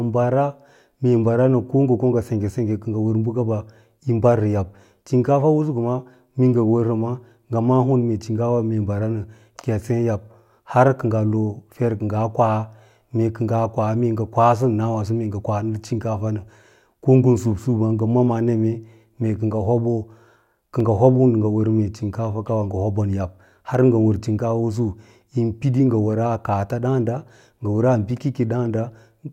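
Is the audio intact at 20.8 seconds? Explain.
No. At 20.80 s there is a single sharp click in the speech. It is likely caused by dropped samples, a fraction of a millisecond lost, so the waveform jumps straight to a later value. Nothing audible goes missing, only the abrupt step.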